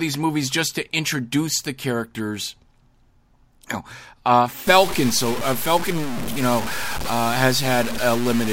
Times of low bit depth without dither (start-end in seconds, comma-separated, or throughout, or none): 4.67-8.52